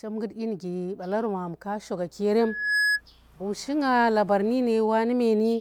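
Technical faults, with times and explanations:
2.39 to 3.01 s, loudspeaker feedback squeal: A single tone at 1.7 kHz rises out of the speech. It swells over something like 0.4 seconds, then sits about 5 dB louder than the speech until it stops. The microphone is picking up the loudspeaker it feeds. At 1.7 kHz the gain around that loop exceeds one. So each pass round the loop makes that tone louder than the last, and it grows into a squeal.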